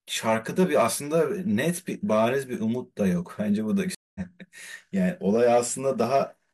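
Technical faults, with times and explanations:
3.95–4.21 s, stream reconnect: the connection drops and the speech goes silent for about 205 ms, then a fresh decoder restarts it roughly 150 ms further on, skipping material.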